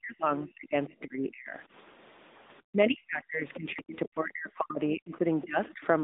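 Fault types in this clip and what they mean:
AMR narrowband mobile codec: the speech passes through a 10.2 kbps mobile codec, leaving nothing above 3.8 kHz and a plainly audible buzzy, synthetic vocal-tract coding throughout.
Speech suppressed in double talk: from 0.0 to 1.58 s, 2.7 to 5.25 s and 5.44 to 5.84 s the voice sinks by up to about 40 dB, likely an echo canceller ducking it during overlapping talk.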